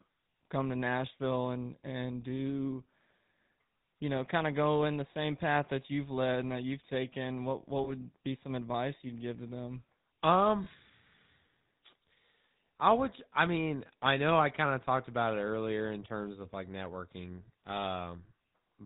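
The whole clip runs through the GSM full-rate codec, and you can plainly hear it: nothing above 4 kHz, plus that buzzy, gravelly grain from the pulse-train excitation standing in for the real voice source, which fits the old 13 kbps coder.

There are two spots with lost GSM frames, at 7.84 to 7.91 s and 10.64 to 10.67 s. Each sounds like a single dropped frame of about 20 ms. The decoder repeats the last good frame, so you get a brief metallic ring instead of a gap.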